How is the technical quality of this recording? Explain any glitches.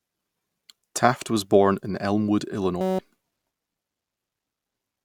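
The recording has one clear glitch, a system hang loop from 2.81 to 2.99 s. The playback or capture path stalled while the hardware kept replaying one 5.33 ms slice, consistent with a 256-sample buffer. The repetition produces a steady 188 Hz buzz, and about a fifth of a second of audio is lost.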